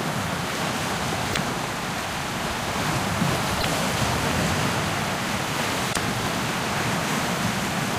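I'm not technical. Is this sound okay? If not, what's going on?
No, there are three short glitches, at about 1.29, 3.57 and 5.89 seconds, each lasting roughly 80 ms. They're damaged data in a compressed stream: a few bits of the compressed file got scrambled or lost, so the player couldn't make sense of those bits, briefly lost its place, and had to hunt for the next clean chunk. You hear that as a quick chirp, squawk, click or short gap cutting into the sound.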